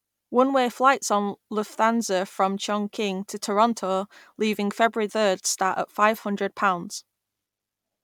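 A speech recording with one brief glitch from 5.08 to 5.11 s, where the sound breaks and jumps ahead. The likely cause is a broken MP3 bit reservoir: a cut of whole 26 ms frames leaves the next frame reading borrowed data from the wrong frame.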